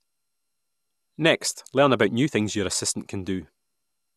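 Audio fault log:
Throughout: generation loss, likely from around ten repeated MP2 encodings near 128 kbit/s, each requantising the speech afresh, leaving swirly, hollow, smeared tone with blurred attacks and nothing above 12.6 kHz.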